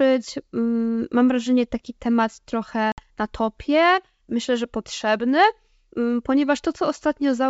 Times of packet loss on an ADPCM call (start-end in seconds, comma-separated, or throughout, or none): 2.92-3.02